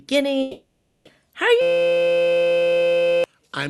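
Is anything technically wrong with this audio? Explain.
Yes, two things go wrong in this speech clip.

From 0.41 to 1.07 s there's what sounds like a long network dropout. The audio stops arriving, and for about 640 ms the receiver keeps smearing the last sound forward as a fading buzzy fill instead of real speech. That stretch is simply gone. When things resume at 1.07 s, the talk picks up later on with nothing of the missing part replayed. It's most likely a network gap, though the sound alone can't fully pin that down.

Then from 1.61 to 3.24 s you get a system hang loop. Something froze, but the sound hardware kept replaying the same tiny piece of its buffer, about 5.8 ms long, over and over, which fits a 256-sample buffer. Repeating that fast gives a steady buzz at about 172 Hz instead of a stutter, and it lasts roughly a second and a half, so all the real audio from that stretch is lost.

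The call codec itself is behaving as it should. Its bandwidth tops out around 12 kHz.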